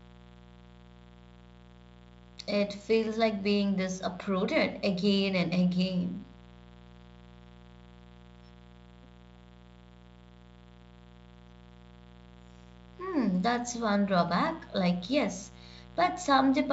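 From start to finish the speech carries a mains buzz: a steady, raspy 60 Hz hum, roughly 25 dB below the speech, from switching spikes twice per cycle. A spectrogram shows evenly spaced horizontal lines at 60 Hz multiples up to several kHz, within the 7 kHz G.722 band. The waveform shows small regular spikes 120 times per second.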